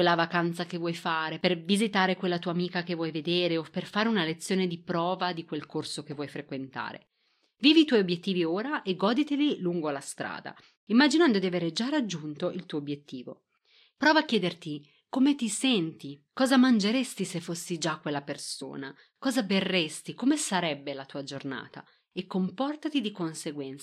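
At 18.61 s, just after "se fossi già quella", there are compressed frames skipped: roughly one frame of the encoded stream never reaches the output, so the speech jumps ahead by around 20 ms. The join is heard as a brief discontinuity.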